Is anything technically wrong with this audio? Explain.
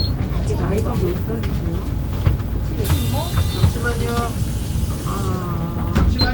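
No, nothing technically wrong can be heard here: the everyday sound comes through as an intact signal without any audible dropouts, glitches or other disturbances.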